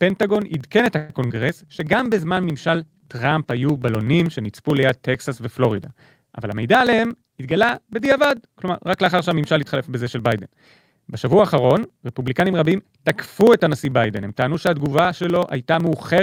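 From 0.10 s to the end, periodic USB or driver dropouts run through the speech. A tiny slice of audio is skipped every 0.063 s, about 16 times a second. Nothing fills the gaps. The signal just jumps ahead. This rate points to a background task stalling the bus or driver on a fixed cycle. It is heard as a steady train of ticks. They sound only while the voice is present and vanish in pauses.

At 0.97 s the sound hangs for a moment. The last bit of voice is stretched into a fading buzz until 1.20 s, filling about 118 ms. Then the speech carries on from where it stopped. Nothing is lost, but the delay grows by that 118 ms. This is a call audio freeze. The likely cause is delayed packets that left the jitter buffer empty while the receiver waited.

At 1.28 s comes a short concealed packet loss, ending at 1.32 s. About 20 ms of audio never reached the decoder. The receiver covered it with 19 ms of made-up continuation, drawn from the sound just before. 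It then blends back into the real signal. The result is a brief smear or small wobble in the voice.

From 1.45 s to 9.01 s there is a call bitrate drop. The encoder falls from 64 kbps to 28 kbps. It stays at that low rate for about 4.6 s. The bandwidth estimate fell, so the codec had far fewer bits to spend. The speech turns coarse and watery. Quality comes back once the rate climbs again.

Inside that stretch, from 6.46 s to 7.83 s, a jitter buffer speed-up takes place. The buffer held more audio than it wanted. To shed the excess, the receiver cut out many short pieces of a pitch period or so. Roughly a tenth of a second goes in total. Playback runs at about 108% speed. The pitch stays the same, but the speech sounds hurried through this section.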